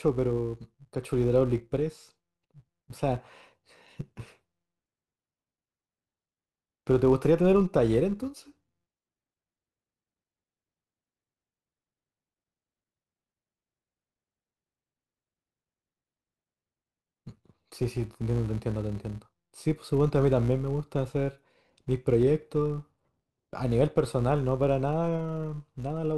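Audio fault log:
Throughout, filter restarted on every block: the filter loses its stored state at each block boundary and starts again from silence, so every block opens with a small transient. These ticks repeat at 172 Hz and form a steady buzz under the speech, which fits a 256-sample block. Mains hum holds a fixed level and sits at 50 or 60 Hz. This buzz instead rises and falls with the speech and fades in the pauses.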